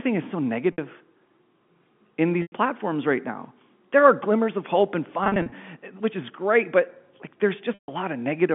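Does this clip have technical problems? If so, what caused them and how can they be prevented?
Yes. At 0.72 s, after "is so", the sound briefly holds on a buzzy, repeated tone for about 60 ms. A 100 ms hold at 2.42 s, just before "right now", starts to fade out. Between 5.24 and 5.52 s, between "glimmers of hope and" and "which is great", several short stutters (the longest about 40 ms) add up to about 140 ms. Another 140 ms gap at 7.74 s fades toward silence before the sound returns.

This is packet loss with pitch repetition, heard through the 150 Hz to 3.5 kHz band of G.711 telephone coding. Audio packets went missing, and the receiver covered each gap by looping the last pitch period and fading it out. The gap lengths fit 20 ms packets. A wired connection or a larger jitter buffer would prevent it.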